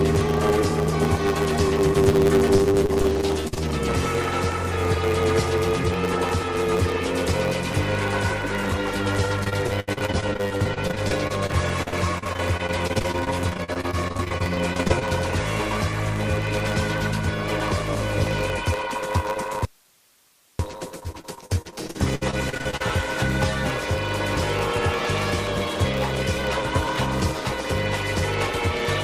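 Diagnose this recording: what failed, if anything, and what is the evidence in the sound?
A steady buzz at 100 Hz runs under the whole recording, and everything moves about 1.07 times too fast while the pitch stays about where it should. This is a block size mismatch (truncated) at the driver or buffer stage. One stage writes longer blocks than the next one reads, so the tail of each block is discarded. The buzz marks each cut, and the skipped audio speeds things up. The sound fits a 512-sample write block.

From 2.56 to 3.68 s, 9.44 to 15.03 s and 21.00 to 22.82 s, the sound turns choppy, with pieces missing. This is repeated packet loss (robotic sound) on the network path. Gaps come in quick succession, with the longest about 51, 79 and 64 ms in the three stretches. Each hole is patched by extending the last sound, so roughly a quarter of each stretch is concealment rather than real signal.

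At 19.65 s the sound cuts off abruptly, and only hiss remains until it returns mid-flow at 20.59 s, about a second later. This is an audio dropout to a faint residue, with the leftover hiss sitting around 35 dB below the normal level. The hard edges rule out a pause or fade. The likely cause is that the wanted signal was lost upstream while the path after the break stayed live and kept passing its own noise.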